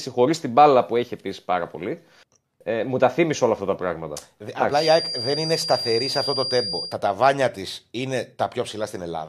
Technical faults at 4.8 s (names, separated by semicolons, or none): feedback whistle